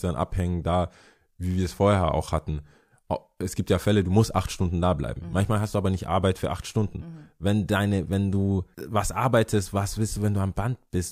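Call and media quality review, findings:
No audible faults found.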